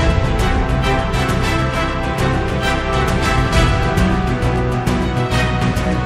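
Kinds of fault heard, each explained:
Word clock ticks: two unlocked digital clocks slipping, so single samples drop or repeat, giving sharp ticks about every third of a second from 0.2 to 5.9 s.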